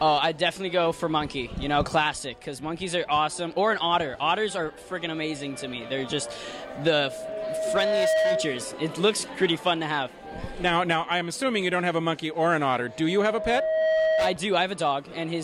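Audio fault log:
6.62–8.74 s and 12.86–14.43 s, loudspeaker feedback squeal: a single 636 Hz tone swells over about a second and a half, then about a second, to around 5 dB above the programme. The loop gain is exceeding one there. A steady hum or interfering tone would hold level, but this one grows by itself.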